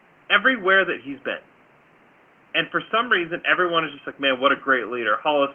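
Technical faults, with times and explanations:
Nothing goes wrong here: the room noise sits about 33 dB under the speech, and the top end stops around 8 kHz, which is just what you'd expect from an Opus call at about 24 kbps.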